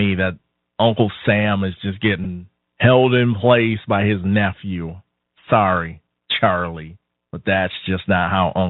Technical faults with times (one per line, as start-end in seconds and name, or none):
0.00-8.70 Bluetooth CVSD headset codec
2.24 Bluetooth headset packet repeated